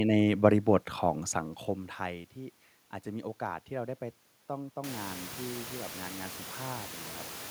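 The speech signal carries no technical fault: the gradual fader-style level moves are smooth, and the room's background noise rises by about 24 dB at around 5 s, ending up about 18 dB below the speech.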